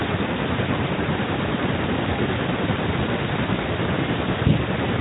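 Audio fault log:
Nothing stood out on listening to this speech clip.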